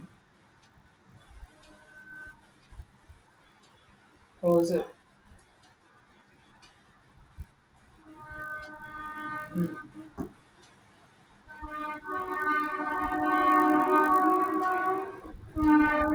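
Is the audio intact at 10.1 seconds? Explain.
No. At 10.1 s, as throughout, the resampler restarted on every block: each 20 ms chunk of the 24 kHz to 48 kHz conversion was converted without its neighbours, so every edge errs. This gives a steady 50 Hz buzz, present only with speech, unlike irregular dropout clicks.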